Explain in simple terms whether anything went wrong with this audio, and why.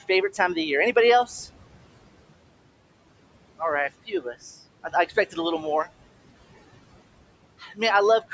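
The noise suppressor is working hard here, so you get noise suppressor artifacts: the background noise ducks between phrases and swells under them.

It also mistakes bits of speech for noise, which is speech cut by the noise suppressor. Short pieces sound swallowed at 1.25 to 1.47 s, at 4.06 to 4.36 s just after "right a", at 4.83 to 5.38 s just before "a little more", and at 7.59 to 7.8 s. The room's own noise stays well below the voice but gets pumped around by all this.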